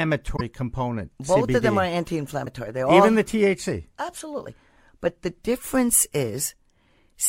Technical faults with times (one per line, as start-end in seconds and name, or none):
0.33-0.41 damaged data in a compressed stream
2.44-2.48 damaged data in a compressed stream